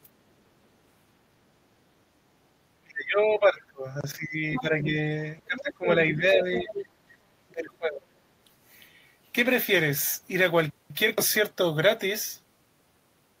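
From 2.82 to 5.16 s the speech is suppressed in double talk. Its level dips repeatedly, by roughly 25 dB at the deepest, and about 2 s of the stretch is affected, so the speech thins and breaks up in pieces. The likely cause is that both ends were talking at once and the echo canceller, unable to separate the local talker from the loudspeaker echo, attenuated everything. The same pattern returns from 5.45 to 6.72 s, with drops of around 20 dB over roughly 1 s in total, and again from 7.48 to 8.08 s, with drops of about 25 dB over most of that window.

The other side's voice leaks through in three places: 4.54 to 4.61 s, 5.40 to 5.61 s and 6.55 to 6.86 s. It sits roughly 10 dB below the speech in the first and last of these, and around 20 dB below in the middle one, and it is heard as short scraps of a second voice. This is likely residual echo, where the loudspeaker playback reached the microphone and the canceller did not fully remove it.

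From 7.00 to 7.20 s the background is gated by the echo canceller. The room sound drops by about 13 dB for roughly 200 ms and then returns, because the canceller clamped the microphone while the loudspeaker was active and released it afterwards.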